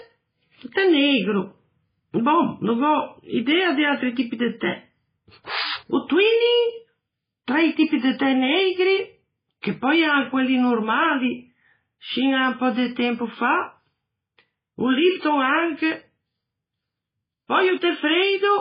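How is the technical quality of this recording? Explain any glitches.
Quality's pretty rough. Heavy MP3 compression runs through the whole speech clip. Nothing comes through above 5 kHz, so the top end is just gone, and the remaining sound has that watery, swirly texture, with s sounds going metallic and chirpy and consonant attacks smearing. That's likely an MP3 encoder starved of bits, which fits a very low rate around 16 kbps. It chops the treble at a fixed point and drops weak frequency detail that flickers in and out from frame to frame.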